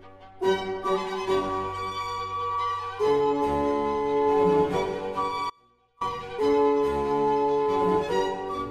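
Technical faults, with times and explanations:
5.50–6.01 s, audio dropout to a faint residue: the signal cuts abruptly for about half a second, leaving only a faint leak roughly 30 dB down, likely a brief break upstream while the path stayed live.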